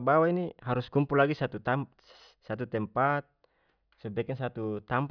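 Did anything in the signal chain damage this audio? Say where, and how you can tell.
No, nothing in the chain damaged it.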